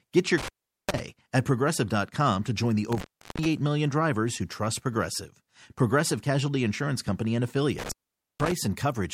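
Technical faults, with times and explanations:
0.38–0.99 s, 2.92–3.46 s and 7.79–8.52 s, intermittent contact: the speech cuts out for about 0.40 s, 0.38 s and 0.48 s, the second between "to join the" and "million drivers who trust". A loose connection briefly opening produces crackle at each break and reconnection and faint hiss during the gap, not the clean silence of a digital dropout.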